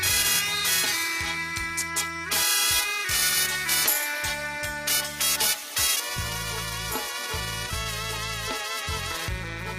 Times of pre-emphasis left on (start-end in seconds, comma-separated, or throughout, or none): 0.00-6.00